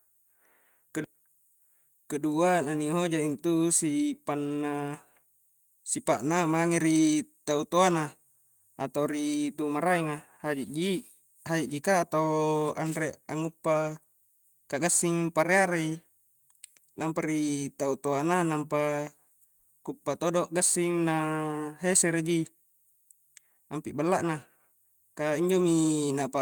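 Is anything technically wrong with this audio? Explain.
No, nothing technically wrong can be heard here.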